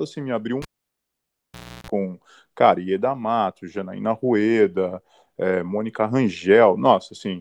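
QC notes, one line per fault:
0.62–1.90 s, cable pulled and plugged in: pop, 1.23 s of near silence, then 0.34 s of 60 Hz mains buzz while only the tip touches, and a pop on reconnect.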